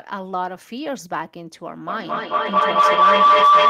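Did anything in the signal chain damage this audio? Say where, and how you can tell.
Yes. From 1.88 s to the end of the clip a tone of around 1 kHz rises out of the speech, building with repeats roughly every fifth of a second and peaking about 14 dB above the talker. That is feedback howl, which arises in the call path where two devices share a room. Each pass from microphone to loudspeaker and back adds gain, so the loop narrows onto its favoured frequency, and the round-trip delay sets the pulsing.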